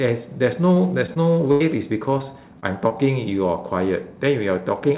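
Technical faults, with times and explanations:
0.74–1.62 s, repeated packet loss (robotic sound): four gaps, the longest 84 ms, are patched by extending prior sound, giving choppy stretches with pieces missing. The spectrogram shows frozen, smeared harmonics.
2.18–2.22, 2.60–2.64 and 2.88–2.92 s, short concealed packet loss: about 20 ms each goes missing and is filled from the preceding sound, causing brief wobbles. The waveform shows small repeated-cycle patches.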